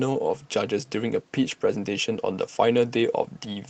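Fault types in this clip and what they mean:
Lost packet rebuilt from error correction: a brief rough, noisier patch from about 1.51 to 1.53 s, with no gap or dropout, just a 20 ms stretch that sounds grainier than the speech around it. One packet went missing, and the next packet carried a low-bitrate backup copy of it through Opus in-band forward error correction. The decoder played that coarser copy in place of the original, so the sound continues but briefly loses detail.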